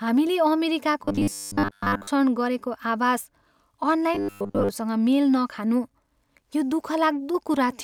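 Audio likely arrived too seldom, so short stretches of roughly 10 ms were replayed in place of most of the missing material. That produces robotic sound from repeated short buffers, a rigid metallic 100 Hz buzz over the speech, from 1.04 to 2.07 s and again from 4.15 to 4.69 s.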